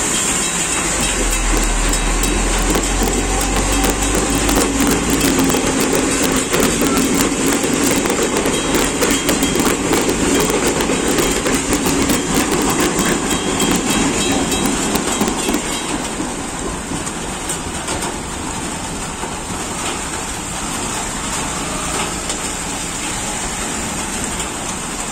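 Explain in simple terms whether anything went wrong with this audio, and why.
Something did go wrong: integer overflow, heard throughout the clip. The loudest peaks push just past what the numbers can hold, and instead of flattening off they wrap around to the opposite extreme. That's why a tiny fraction of moments snap as harsh, sudden cracks, much nastier than ordinary clipping.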